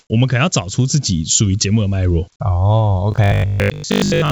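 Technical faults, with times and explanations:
0.00–0.10 s, comfort noise in place of the background: The opening tenth of a second is a flat, featureless hiss, about 47 dB below the loudest speech and shifted about 4 dB from the true background. The likely cause is discontinuous transmission with receiver-generated noise. A spectrogram shows smooth, texture-free shading.
3.12–4.32 s, robotic sound from repeated short buffers: The speech turns into a rigid metallic buzz at 50 Hz, likely from a 20 ms buffer replayed while roughly 70 percent of the real audio is skipped. A spectrogram shows evenly spaced vertical striations; the waveform shows identical repeating cycles.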